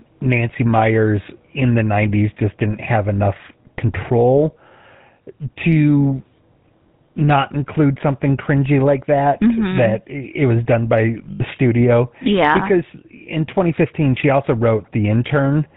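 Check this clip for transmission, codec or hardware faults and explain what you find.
Two faults are present: a codec problem across the whole clip and a brief dropout in transmission.

Throughout, the speech sounds buzzy and gravelly with nothing above 4 kHz, the GSM full-rate codec at a rate that fits 13 kbps, rebuilding the voice from coarse pulse excitation.

From 11.32 to 11.42 s, between "it was done by" and "studio yeah because in", lost GSM frames leave an 80 ms metallic ring. The decoder repeated the last good frame, which fits four 20 ms frames.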